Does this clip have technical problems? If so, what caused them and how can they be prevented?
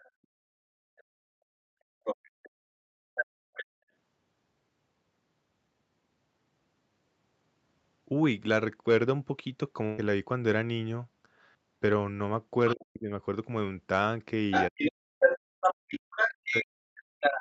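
Yes.

A second voice is heard under the talker: very faintly from 0.0 to 1.03 s, nearly as loud as the talker from 2.04 to 3.65 s, briefly at 12.67 to 12.75 s, and louder than the talker from 14.51 s to the end. The likely cause is the other side's voice leaking through: the loudspeaker's sound reaches the microphone and the echo canceller leaves part of it in. A headset, or better echo-canceller tuning and lower speaker volume, would prevent it.

From 0.46 to 0.70 s the room background drops out, falling by about 40 dB for roughly a fifth of a second before it returns. This is background gated by the echo canceller, which clamped the microphone hard while the loudspeaker was playing. Gentler suppression with comfort-noise fill would keep the background steady.

At 9.85 s a burst of packet loss holds the last sound and fades it out for about 0.12 s. The receiver stretched the last received audio over the gap, and about 0.12 s of the original is missing when the sound resumes at 10.01 s. 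A more stable network, a larger jitter buffer or forward error correction would reduce this.

The talker's own voice dips very deeply or cuts out in pieces from 12.75 to 13.11 s and again from 14.70 s to the end, while the far side is playing on the loudspeaker. The likely cause is speech suppressed in double talk: with both sides talking at once, the echo canceller couldn't separate the talker from the echo and turned everything down. Headset use or a canceller with better double-talk detection would prevent it.

Throughout the clip, nothing is heard above 8 kHz, which is the normal limit of the Opus call path and is not a fault.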